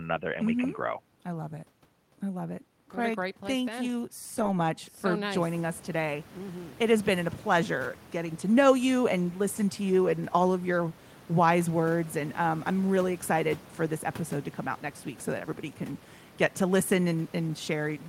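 From 4.37 to 4.51 s, just after "place thank then you", lost packets are rebuilt from error correction. Low-bitrate copies fill the loss, about 80 ms rebuilt, so there is no gap, only briefly rougher, noisier sound. This sets it apart from plain concealment, which smears or buzzes. The room noise rises by about 16 dB around 5.5 s and is part of the recording.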